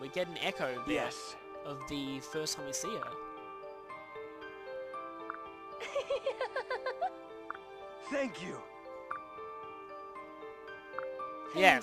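A filter restarted on every block runs throughout. Each block starts from silence, so a 25 Hz buzz of ticks follows the sound's level.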